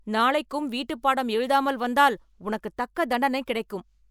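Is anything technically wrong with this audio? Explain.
No, nothing technically wrong is audible in this speech recording.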